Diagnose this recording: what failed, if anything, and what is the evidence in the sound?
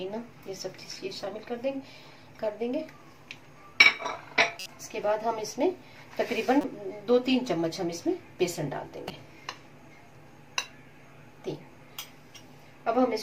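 The codec decoded corrupt frames: flipped bits inside compressed frames were played rather than concealed. Misread gains and codes put energy at wrong frequencies, giving short chirp-like bursts peaking around -25 dBFS at 4.59 to 4.66 s and around -20 dBFS at 6.61 to 6.64 s and 9.08 to 9.11 s, each spanning a few frames.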